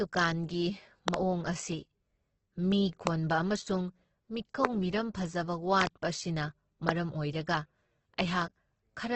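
Heavy Opus compression in its music mode, likely at a bitrate around 12 kbps, leaves the speech grainy and rough throughout, with nothing above 8.2 kHz. Voltage glitches then likely inject loud pops, roughly 25 dB above the speech: double pops at 1.08–1.16 s and 5.81–5.89 s, and single ones at 3.07–3.09 s, 4.65–4.67 s and 6.89–6.91 s, while the speech continues underneath.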